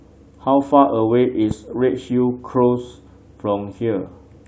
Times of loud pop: 1.51-1.53

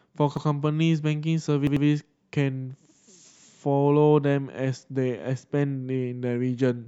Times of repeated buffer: 0.37-0.46, 1.67-1.86

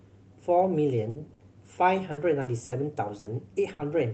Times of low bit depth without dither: none

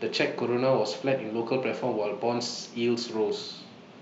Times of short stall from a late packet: none

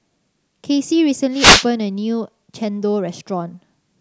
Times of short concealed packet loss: none

